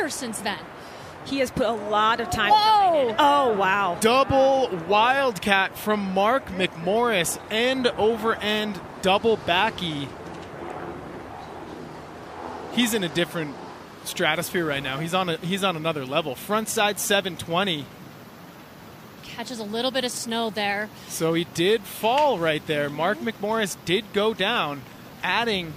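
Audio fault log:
No faults found in the signal path; nothing to log.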